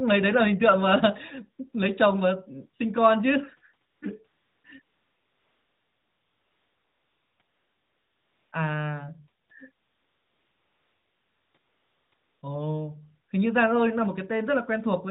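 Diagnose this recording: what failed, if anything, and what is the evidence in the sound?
AMR comfort noise appears at 3.90–4.02, 4.28–4.64, 4.82–7.40, 7.42–8.52, 9.44–9.50, 9.72–11.54, 11.58–12.12 and 12.14–12.42 s, with gaps from 60 ms up to 2.58 s. This is a codec-stage fault. Discontinuous transmission judged the talker silent and stopped sending speech frames. The receiver then filled each gap with smooth synthetic noise built from a rough level and spectrum estimate, so the real background switches out and a steady hiss cuts in.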